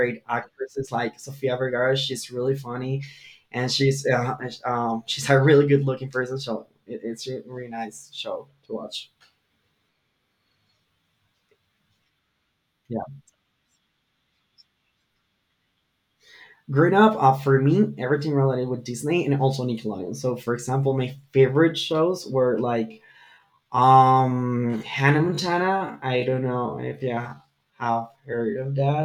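Speech, with a time-stretched section running from 22.84 s to the end of the clip. Software likely stretched that final stretch to fill a longer slot, holding the pitch steady by repeating short slices of the waveform rather than resampling. The result is that delivery abruptly drops to two-thirds of its earlier pace at 22.84 s while the pitch stays put, and the slowed speech drags.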